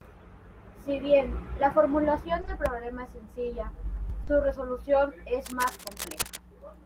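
At 2.41 s and again at 2.45 s, just before "problema es sencilla", two back-to-back 20 ms gaps of short concealed packet loss leave a brief smear where the receiver extends the preceding speech. A third, 40 ms long at 4.23 s right after that phrase, wobbles audibly. Unlike a hard dropout, there is no silence, only a momentary blur.

From 5.45 to 6.38 s, cable scratch noise rides roughly 10 dB under the speech, as dense, irregular rustling bursts rather than steady hiss. It likely comes from a worn cable or connector being moved, its contact resistance fluctuating.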